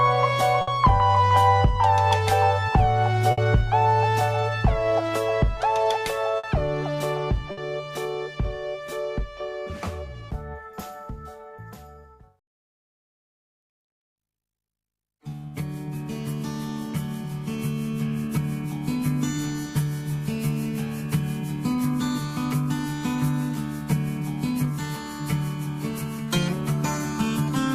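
Burst of packet loss at 0.61, 3.31, 6.37 and 7.51 s: each time about 60 ms of audio never arrives, the last sound is stretched and faded to cover it, and playback then resumes further on.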